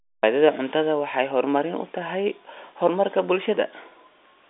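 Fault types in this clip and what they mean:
No faults present; the speech carries the expected G.711 telephone band, about 200 Hz to 3.6 kHz with nothing above 3.7 kHz, as that line format dictates.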